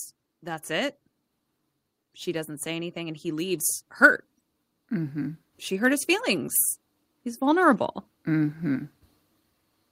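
Speech, with automatic gain rising between 2.24 and 6.57 s. The level climbs by about 7 dB over those four seconds. Voice and background noise swell together. The gain control judged the input too quiet and slowly pushed its gain upward.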